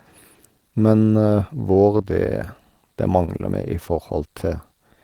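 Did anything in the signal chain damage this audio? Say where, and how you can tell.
Yes. The network stage dropped three 20 ms stretches of this speech, consistent with lost 20 ms packets: two back to back from 1.97 to 2.05 s, and one from 3.25 to 3.30 s. This is short concealed packet loss. The decoder bridged each gap by extending the preceding sound, so those moments come through as brief smears or wobbles.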